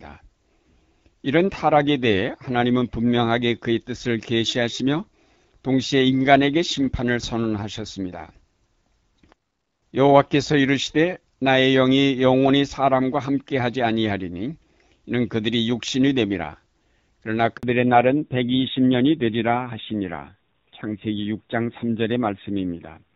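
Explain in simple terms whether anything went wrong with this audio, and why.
At 17.57 s the call switched networks and no sound arrived for 60 ms. This handover gap leaves a brief hole of silence in the speech.

Right after, from 17.63 s to the end, the call fell back to narrowband. Everything above 4 kHz disappears, so the voice turns duller and rougher than the clearer HD Voice sound before it.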